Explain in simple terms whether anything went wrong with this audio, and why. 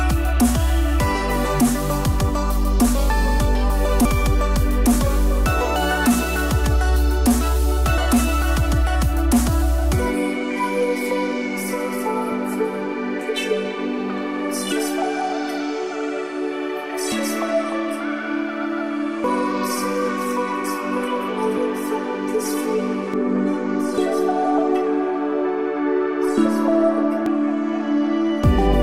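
Damaged data in a compressed stream shows up four times, at 4.05, 7.98, 19.24 and 27.26 seconds. Each time, a small stretch of the compressed file was corrupted, so the player couldn't make sense of it. It dropped that bit, hunted for the next clean starting point and carried on. You hear a brief chirp or blip.

De-emphasis applied wrongly begins at 23.14 seconds and lasts to the end. A treble-reducing filter, meant only to undo a matching treble boost, was either used on audio that never had that boost or used twice. The high frequencies are pulled down steadily, so from that point the sound turns dull and muffled, as if heard through a blanket. The blip at 27.26 seconds falls inside this muffled stretch.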